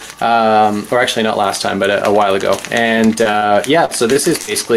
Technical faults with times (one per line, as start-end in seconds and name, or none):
3.23-3.43 short concealed packet loss
3.85-4.17 short concealed packet loss
4.41-4.49 burst of packet loss